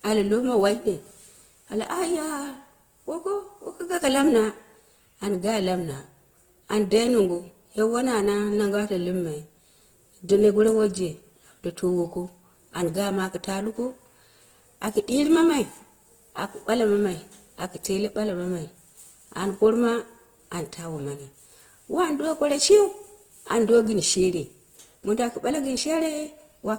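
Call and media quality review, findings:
Grainy, rough speech throughout; likely Opus compression (CELT mode), starved bands filled with folded or noise energy, fits 16 kbps. Spectrogram: smeared noisy texture reaching 20.1 kHz, few holes.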